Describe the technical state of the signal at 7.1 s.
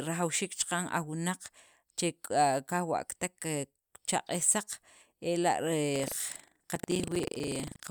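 Buffer tearing runs from 5.92 s to the end: writer and reader cross each 40 ms period, splicing in roughly 70 ms-old audio, giving a 25 Hz rattle seen as regular waveform discontinuities and vertical spectrogram stripes.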